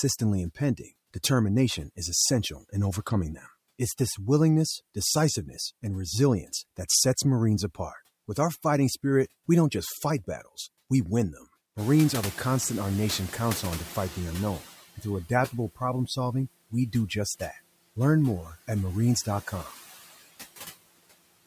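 Noise suppressor artifacts run through the whole clip. The suppressor pulls down, frame by frame, the frequency bands it judges to be steady noise, by about 15 dB here. The background therefore dips in the gaps between words and swells back up underneath them.

Noise suppressor catching up begins at 11.77 s, right after "battles we win them", and lasts until 14.68 s, just before "and through adaptable problem". Around 12 s the room noise jumps by about 21 dB, settling about 19 dB below the speech. The suppressor's noise estimate lags behind that jump, so the louder background first comes through with only about 10 dB of reduction. It then sinks gradually as the estimate adapts over roughly 2.9 s.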